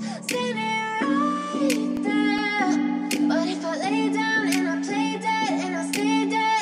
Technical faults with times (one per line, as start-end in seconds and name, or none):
1.76-2.59 CD scratch ticks